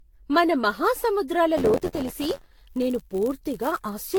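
From the start the speech has a swirly, hollow quality, with consonant attacks smeared and a watery noise that sounds worse than a single lossy encode would leave, and nothing above 19.4 kHz. This is generation loss, likely from the audio being decoded and re-encoded about seven times with Vorbis at rates around 80 kbit/s. Each pass quantised the signal again on a shifted frame grid, so the artefacts and spectral gaps piled up.

At 1.57 s, just after "మన మహాసముద్రాల", a robotic buzz at 86.1 Hz appears and rides on the speech to the end, dropping away in the gaps. This is buffer tearing. The writing program and the playback hardware have slipped so they cross inside every period, which fits a 512-sample buffer. A few percent of each buffer carries audio from about 20 ms earlier, and the hard joins at both edges repeat at the buffer rate to produce the rattle.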